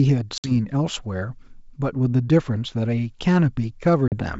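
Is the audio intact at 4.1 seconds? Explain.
No. Packet loss on an ADPCM call cuts a hard-edged hole from 4.08 to 4.15 s, where about 40 ms of audio, roughly a couple of packets, was replaced by silence. Because the decoder's adaptive predictor and step size fall out of step with the sender's, the speech returns slightly distorted, settling within some tens of milliseconds. On a spectrogram this shows as a blank vertical gap with sharp edges across the whole band, up to about 7 kHz on this G.722 call. A waveform shows a flat gap.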